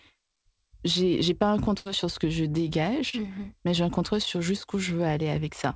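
At 1.78 to 1.87 s, just before "sur ce que je", the speech collapses into a held, fading sound for about 75 ms, then jumps ahead. This is a burst of packet loss. Consecutive packets arrived too late or not at all, so the receiver stretched the last sound while turning it down. About 80 ms of speech is simply gone when the audio resumes.

At 3.09 to 3.15 s, right before "mais j'ai un contrôle", a brief smear of about 30 ms blurs the sound. This is short concealed packet loss. Roughly 40 ms of audio missed the decoder's deadline, so the gap was patched by extending the preceding sound and blending back into the real signal. The call path's band limit, with nothing above 8 kHz, fits the G.722 codec.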